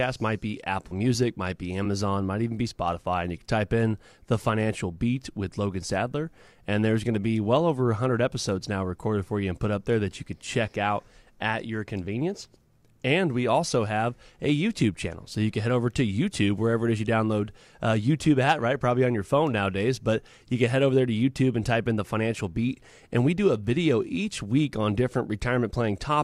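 No technical faults are audible.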